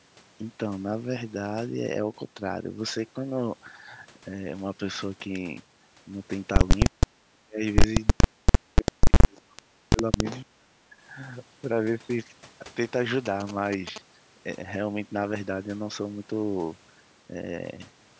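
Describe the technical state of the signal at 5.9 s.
At 5.9 s the speech is intact, with no fault present; it has simply passed through ordinary call microphone processing, whose bass roll-off is normal.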